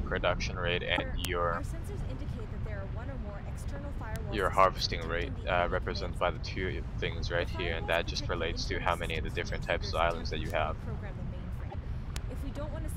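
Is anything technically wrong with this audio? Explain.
Yes. There are two kinds of fault: two short corrupted stretches and four isolated clicks.

From 0.96 to 1.00 s and from 11.69 to 11.75 s, the audio jumps forward and gives a brief chirp, burst of noise or short hole, roughly one to two frames long. The likely cause is a broken MP3 bit reservoir. Frames were lost, and the frame that followed took its borrowed data from the wrong bytes. The burst lengths fit 26.1 ms MP3 frames. On a spectrogram, each event shows as a smeared block of noise or chirp, or a gap, that does not belong to the surrounding material.

At 1.25, 4.16, 10.50 and 12.16 s there is a bit error spike, heard as a single sharp tick. One flipped bit pushed one to three consecutive samples off their true value, each by a power of two, before the signal snapped back. On a waveform, each tick is a needle only a sample or a few wide that stands out from the trace. 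On a spectrogram it is a thin vertical line running through the whole frequency range.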